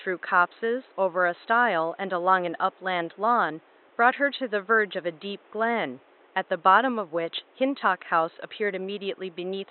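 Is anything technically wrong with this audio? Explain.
No, nothing technically wrong can be heard here.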